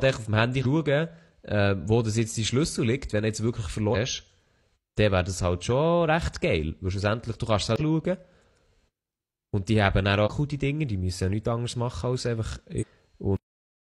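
Damaged data in the compressed stream produces short disturbances at 0.61, 3.90, 7.76, 10.22 and 12.77 s, each 50 to 70 ms, as the decoder loses frame sync. At 13.36 s the speech has a cut-off end, dropping mid-sound into digital silence with no decay because the final buffers never played.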